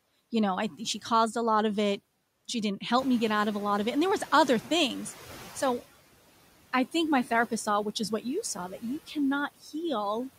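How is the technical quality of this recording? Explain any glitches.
The recording is marred by processing faults from a noise suppressor, one persistent and two brief.

Throughout the speech, the background dips between phrases and swells beneath them. These are noise suppressor artifacts: frame-by-frame gain cuts of about 17 dB on bands judged to be steady noise.

From 2.98 to 5.78 s, when the room noise jumps by about 16 dB around the 3 s mark, the noise comes through with less reduction at first and then gradually sinks. This is the noise suppressor catching up: its noise estimate takes about 2.8 s to adapt, reaching roughly a 10 dB cut, and the noise then settles about 18 dB below the speech.

Between 9.56 and 9.74 s, part of the speech turns faint and swallowed for around 150 ms. This is speech cut by the noise suppressor: it mistook that stretch for noise and pulled it down by up to about 17 dB along with the background.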